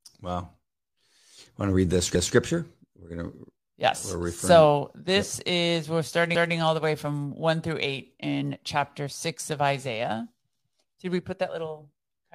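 Overlapping chunks: the speech was handled in 4-second chunks that each began 200 ms early, so a short stretch replays as a stutter at 2.15 s after "to read the", at 6.35 s between "this yep is we're" and "all the way from", and at 10.55 s.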